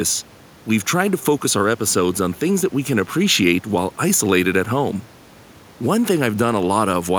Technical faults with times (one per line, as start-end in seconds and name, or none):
none